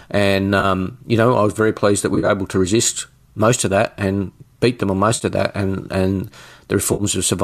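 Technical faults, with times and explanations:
0.60 to 7.03 s, AAC frame loss with concealment: brief smeared, noisy patches at 0.60, 2.15, 5.15 and 6.93 s. The decoder rebuilds 30 to 80 ms gaps from the last good spectrum.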